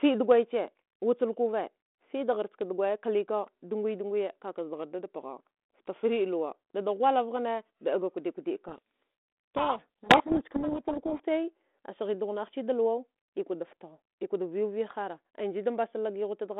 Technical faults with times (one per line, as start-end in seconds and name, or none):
8.68-11.21 codec payload misread